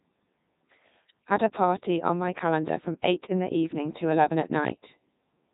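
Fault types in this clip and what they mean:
Codec 2 vocoder, throughout: the decoder rebuilds the speech from sine waves using only pitch, voicing, energy and a spectral envelope, so the real waveform is gone. The result is heavily robotic and buzzy, has nothing above 3.8 kHz, and fits the 3.2 kbit/s mode.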